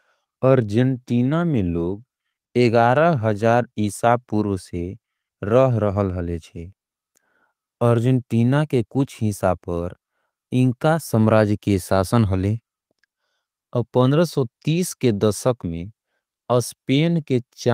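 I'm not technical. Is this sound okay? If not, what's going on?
Yes, there's nothing wrong with this recording.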